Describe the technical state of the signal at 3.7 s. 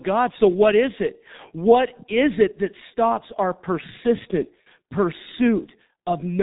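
At 3.7 s the speech is still passing through the G.723.1 codec that affects the whole clip. The encoder models the voice in coarse 30 ms frames at a very low data rate, consistent with roughly 6 kbit/s, and discards everything above 3.8 kHz. The heavy damage makes the speech muffled and hoarse. Consonants smear because the voice model cannot update quickly enough to follow them.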